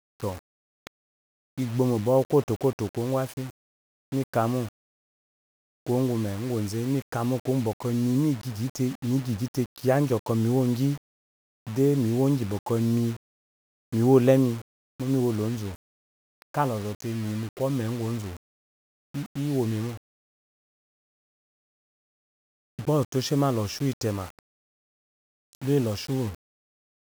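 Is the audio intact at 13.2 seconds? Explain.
No, 13.2 s sits inside a fault that runs through the whole clip. The speech carries a grainy, gritty distortion that rides along with it, roughly 25 dB below the signal, getting coarser in the quiet tails and breaking into sputter or dropping out at the softest moments. That's the sound of low bit depth without dither, likely the audio being rounded to something like 6 bits with no noise added to decorrelate the error, so the error tracks the signal instead of sitting as a steady hiss.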